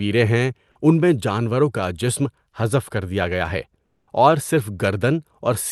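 From 3.85 to 4.07 s, comfort noise replaces the background, likely from discontinuous transmission in the call codec: a steady, featureless hiss about 3 dB quieter, appearing as a smooth, uniform band on a spectrogram.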